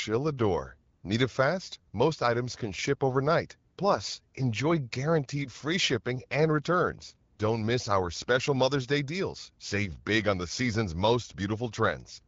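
Speech in which the background briefly turns into a smooth, steady hiss at 0.95 to 1.03 s, at 3.73 to 3.77 s after "items can ship overnight", and at 7.33 to 7.37 s after "free shipping and returns". This is AMR comfort noise: the phone judged these gaps silent, stopped sending speech frames for 80 ms and then twice for 40 ms, and the receiver filled them with synthetic noise. The wideband coding sounds clear, consistent with AMR-WB at about 12.65 kbit/s.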